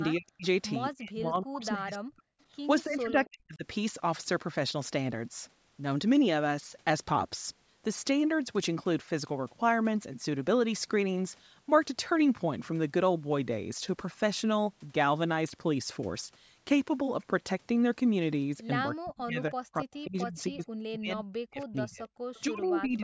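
Speech suppressed in double talk first appears at 0.17 to 0.45 s, then recurs at 0.96 to 2.27 s, 2.85 to 3.65 s, 18.94 to 20.71 s and 20.96 to 22.11 s. The likely cause is the echo canceller treating simultaneous talk from both ends as echo and attenuating the near talker along with it. The voice sinks by up to about 40 dB or breaks into fragments. On a waveform the envelope collapses in patches. On a spectrogram whole columns fade toward the noise floor.

At 22.35 to 22.40 s comes a brief echo leak, likely residual loudspeaker sound the canceller failed to remove. It is a faint ghost of earlier speech arriving 280 ms late at about 30 dB below the voice. On a spectrogram it shows as a faint, smeared copy of preceding harmonic patterns with no matching waveform bulk.

From 22.47 s to the end, double-talk suppression returns more gently, dipping about 15 dB. The envelope is lowered.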